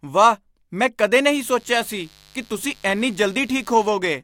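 Speech with a steady, raspy mains buzz from 1.31 to 3.91 s, just after "ਵਾਹ ਮੈਂ ਕਦੇ", sitting well below the voice: switching spikes on 50 Hz mains leaking in.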